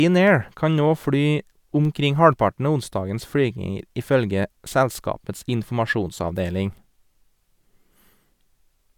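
Speech recording in which no technical fault can be heard at any point in the signal.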